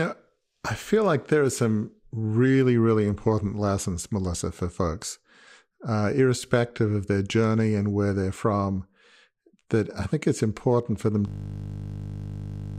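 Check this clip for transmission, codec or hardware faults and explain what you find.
There's one fault here, a system hang loop right at the end. Just after "it's important for them", at 11.28 s, the system froze while the sound hardware kept replaying the same ring buffer. A 20 ms slice of audio repeats exactly, over and over, until the clip ends. Because the loop is so short, it comes across as a steady 50 Hz buzz rather than a stutter.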